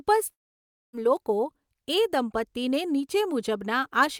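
Long network dropout, 0.31 to 0.95 s: the speech stops mid-flow, the last sound smears into a brief fading buzz, then near silence for about 0.6 s. This is likely a lost stretch of packets, and the speech resumes with roughly 0.62 s missing.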